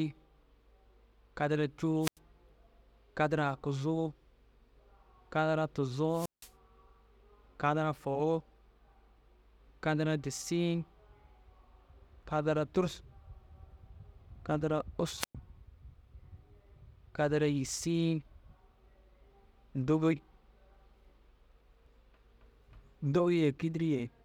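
Wireless microphone squelch dropouts occur at 2.01–2.18 s, 6.11–6.52 s and 15.19–15.35 s. The radio link fades, hiss rises, then the squelch mutes the speech for about 91, 168 and 107 ms.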